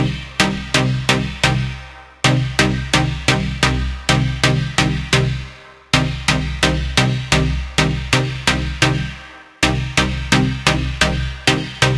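Everyday sounds with aliasing throughout. Content above 11 kHz was not filtered before the rate was lowered, which fits a 22 kHz rate, so it folds back as unrelated tones around 20 dB below the signal. A spectrogram shows energy running hard to the 11 kHz edge, with mirrored components below it.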